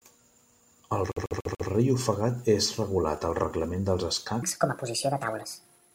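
Repeated frames, from 1.12 to 1.69 s: a 144 ms block of compressed frames plays four extra times, adding 576 ms and stuttering just before "ofegat és regulat al".

Section at the wrong speed, from 4.43 s to the end, right after "regulat al reglament dels": playback runs 1.47 times too fast, pitch jumps by about seven semitones and the speech sounds hurried, likely from a mismatched clock.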